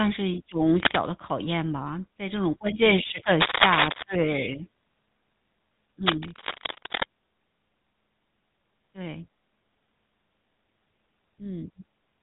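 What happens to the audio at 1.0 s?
Cable scratch noise runs from 0.79 to 0.96 s, ending just before the 1.0 s mark. A burst of dense, uneven crackle rides over the speech for under a fifth of a second, roughly as loud as the voice itself. The likely cause is a worn cable or connector being moved, so that its contact resistance jumps about rapidly and injects ragged noise into the signal instead of passing it cleanly.

Around 1.0 s, as everywhere in the clip, the speech also carries plainly audible GSM full-rate codec damage. The coder rebuilds the voice from a vocal-tract model driven by a sparse, regularly spaced pulse train, which gives it a buzzy, gravelly roughness, strongest where the voice rises in pitch. Nothing comes through above about 3.8 kHz, a limit that fits the 13 kbps full-rate coder.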